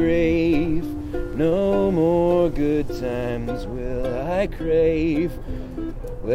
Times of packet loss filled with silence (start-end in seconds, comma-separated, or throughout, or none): none